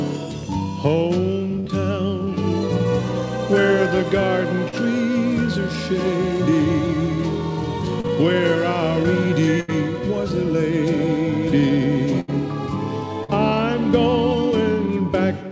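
The audio has been through a call path: nothing appears above 8 kHz on a spectrogram, which fits a wideband codec such as G.722. Four bursts of packet loss occur at 1.60–1.67 s, 9.60–9.71 s, 12.20–12.31 s and 13.24–13.31 s. At each, the receiver extends the last sound as a decaying buzz or hiss for about 46 to 78 ms, then jumps ahead past 40 to 80 ms of missing audio. On a spectrogram this shows as smeared, repeated harmonics fading out before an abrupt restart. Two short concealed packet losses, at 4.68–4.75 s and 8.00–8.07 s, replace about 40 ms of undelivered audio with roughly 35 to 40 ms of synthesized continuation that blends back in. They are heard as a brief smear or wobble, and the waveform shows a slightly too-regular patch with a soft seam.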